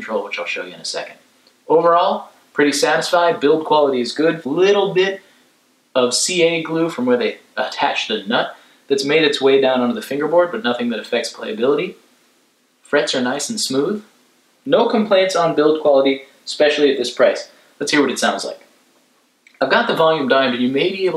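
No technical faults can be heard anywhere in the recording. Nothing interrupts or disturbs the sound at any point.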